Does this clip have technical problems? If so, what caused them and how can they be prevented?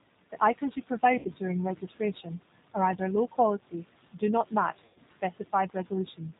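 Yes. The speech runs through the G.729 codec. It rebuilds the voice from a vocal tract filter, a pitch predictor and a few pulses per frame at a rate that fits 8 kbit/s, so nothing above 4 kHz survives and the speech sounds plainly rough and synthetic throughout. Carrying the call over a wideband codec with a higher bitrate would prevent this.

VoIP packet loss concealed by the speech codec occurs twice. At 1.19 to 1.32 s, about 60 ms of audio went missing, consistent with three lost packets. At 4.86 to 5.0 s, about 100 ms went missing. The decoder stretched its last pitch and filter into a sound that fades, and the voice stays weak briefly afterwards. A more reliable network path with a suitably sized jitter buffer would prevent these dropouts.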